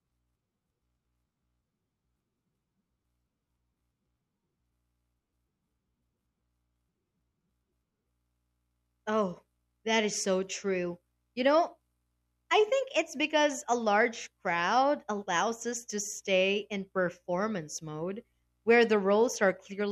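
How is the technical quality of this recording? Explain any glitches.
Listening closely, nothing in the recording stood out as a technical problem or glitch.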